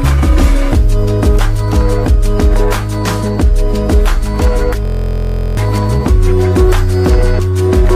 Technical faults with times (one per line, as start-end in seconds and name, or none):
4.85-5.57 system hang loop